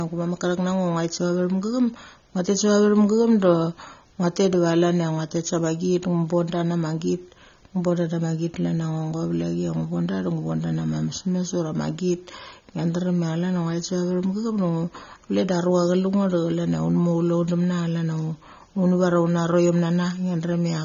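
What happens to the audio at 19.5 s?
At 19.5 s the speech has the same dull, smeared quality it has for the whole clip, with a watery warble on sibilants and held sounds. The likely cause is AAC compression, AAC-LC at a rate that fits about 24 kbps, where quantising each frame's spectrum coarsely leaves gaps and swirling texture. A simple low-pass filter would dull the top just as much but leave the remaining sound clean, without this fizz.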